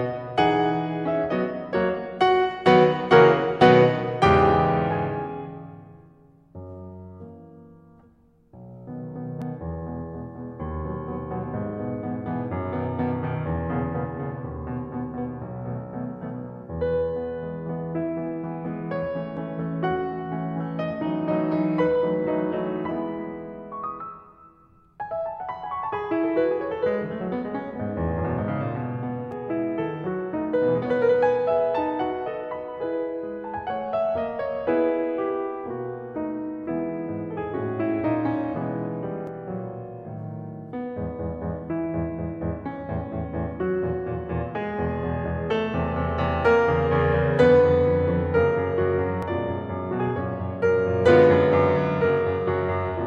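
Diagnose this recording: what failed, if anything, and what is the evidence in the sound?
Audio missing between chunks, at the buffer or recording stage: the music skips at 9.42, 19.37, 29.32, 39.27 and 49.23 s, every 10 s. Each skip loses roughly 50 ms, likely dropped as one chunk closes and the next opens, with the ends butted together. The waveform shows abrupt splices, and a spectrogram shows thin vertical seams.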